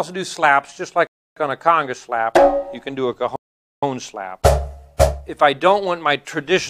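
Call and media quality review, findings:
Rebuffering stall, 1.07–1.37 s and 3.36–3.83 s. Playback halts to silence for 0.29 s, then 0.47 s, and resumes at the exact cut point with no content skipped. Player buffer underrun while waiting on delivery. Adds roughly 0.76 s total.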